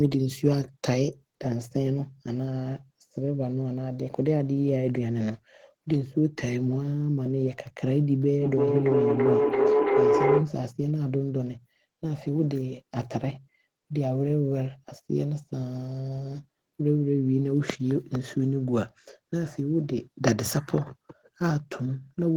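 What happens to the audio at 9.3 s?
A tone near 400 Hz swells to about 4 dB above the speech, with repeats roughly every 0.3 s, from 8.42 to 10.61 s. This is feedback howl: a microphone-to-loudspeaker loop gains level each pass, reinforcing its favoured frequency until broken.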